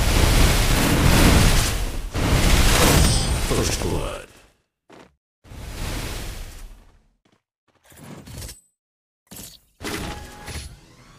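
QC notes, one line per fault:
3.70–3.84 s, loud pop: two sharp pops in quick succession, about 10 dB above the sound beneath, likely from a sudden voltage pulse entering the signal.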